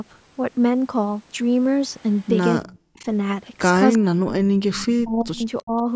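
At 2.13 to 2.28 s a faint echo leak appears: a copy of the speech returns 341 ms late, far below the direct sound, likely because an echo canceller on a loudspeaker end let some of its microphone pickup through. It returns at 2.64 to 2.79 s, louder at around 25 dB down, then at 3.93 to 3.98 s, the strongest at roughly 20 dB below the speech, and briefly at 5.58 to 5.63 s. On a spectrogram these look like thin, smeared repeats of earlier harmonic patterns, shifted about a third of a second to the right.

From 2.66 to 3.06 s the speech is suppressed during double talk. The level dips by up to about 40 dB, likely because the canceller mistook the talker for echo and turned both down. The longest stretch runs from 3.97 to 5.44 s, with another at 5.62 to 5.84 s reaching about 30 dB down. In the waveform the envelope collapses in chunks.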